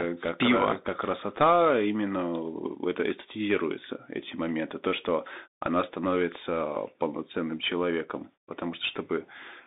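From start to finish, the speech carries the sound of a Bluetooth CVSD headset codec. The band runs only from about 200 Hz to 3.7 kHz, so the top and the lowest bass are gone. CVSD sends one bit per sample, up or down, with an adapting step, which fits a 64 kbit/s stream. The damage is plainly audible. Loud high sounds outrun the step and distort. S sounds turn scratchy. A granular hiss sits under the speech.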